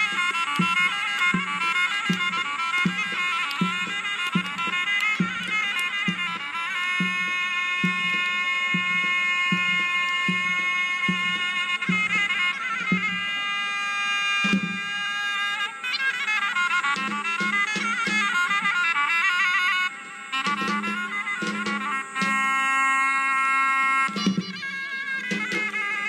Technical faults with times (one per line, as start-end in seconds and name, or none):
15.05 compressed frames skipped